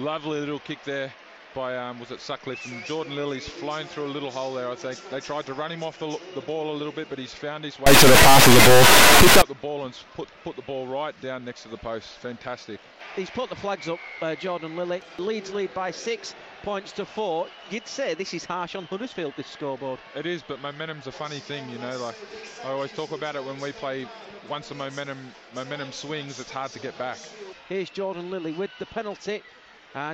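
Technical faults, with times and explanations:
7.86–9.42 s: integer read as float. For about 1.6 seconds the sound turns into an extremely loud, harsh buzz, because integer sample data, likely 32-bit, is being interpreted as floating-point numbers. Most bit patterns then decode to values near zero or far beyond full scale, so the output snaps between silence and the clipping limit. On the waveform this appears as a solid rail-to-rail square-wave block. The spectrogram shows dense broadband energy across the full frequency range.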